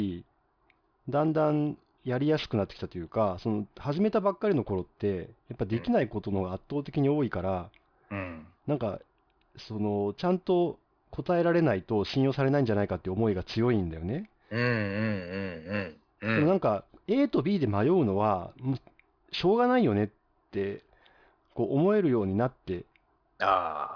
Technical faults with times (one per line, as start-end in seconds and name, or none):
0.00-23.96 aliasing